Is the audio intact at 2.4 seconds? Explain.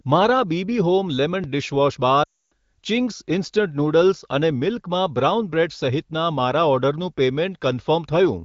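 No. At 2.4 seconds the speech sits inside a run of lost AMR speech frames, from 2.23 to 2.52 s. Corrupted frames failed their check, so the decoder stretched the last good pitch and vocal tract settings with falling gain. The sound smears briefly, then drops to silence.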